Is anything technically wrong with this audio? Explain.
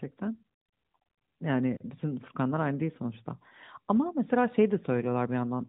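No, nothing technically wrong.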